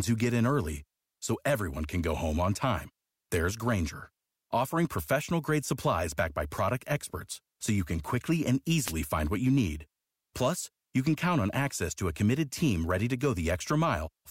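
A wireless microphone noise hit at 8.83 s, lasting about 0.1 s, breaks into this speech clip just after "you can quickly and" as a short burst of static. The analogue FM radio link briefly faded as reflected paths cancelled, letting receiver noise swamp the signal before "find what you need" resumes.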